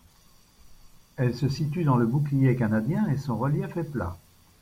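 Nothing in the recording stood out as a problem on listening.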